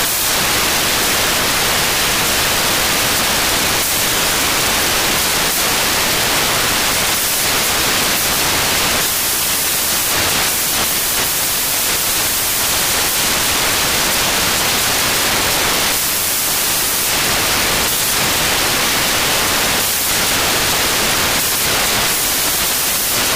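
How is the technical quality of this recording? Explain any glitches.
The technical quality is poor: from start to finish the recording carries loud, harsh broadband noise. These are samples built from the wrong bytes. The reader assembles each sample's bytes incorrectly, whether offset by one, in swapped order or under a mismatched alignment, so the rapidly fluctuating low-order bits end up as the dominant part of every value. What should be fine detail becomes loud, harsh noise across the whole clip.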